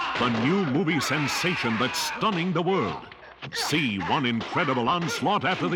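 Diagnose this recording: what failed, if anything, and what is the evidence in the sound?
Nothing here points to a failure at any stage, so there's no evidence of a problem to chase down.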